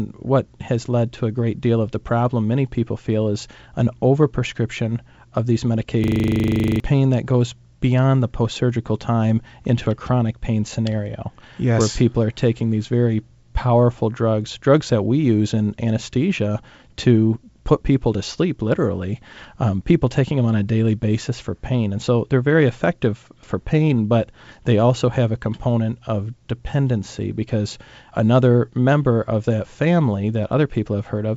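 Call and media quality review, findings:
System hang loop, 6.04–6.8 s, after "an overprescription of these", resuming at "pain that goes beyond". Steady 25 Hz buzz: one 40 ms slice replayed exactly 19 times, likely a ring buffer cycling while host or audio driver froze. Roughly 0.7 s of audio lost. Unlike packet-loss concealment, repeats are identical, with no fade or smoothing. G.722 wideband path clear through 7 kHz.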